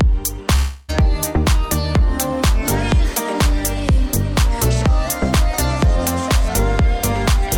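The audio breaks up early, from 0.55 s to 0.90 s. For about a third of a second the sound is replaced by a buzzy, smeared continuation of what came just before. It fades but never drops to full silence. When normal audio resumes, roughly 0.32 s of material is simply gone. This points to a long network dropout, likely a run of lost packets. The receiver stretched out the last good sound to cover the gap.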